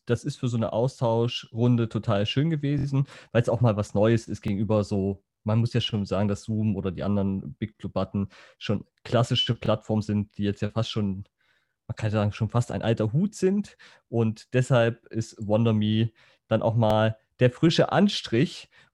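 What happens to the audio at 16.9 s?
A repeated buffer occurs from 16.90 to 16.93 s. New audio arrived late, so the device replayed the last block of about 23 ms, which fits a 1024-sample buffer, once more with hard joins. This gives a brief click-like stutter. Unlike a dropout, essentially nothing goes silent or missing; the same fragment simply sounds twice.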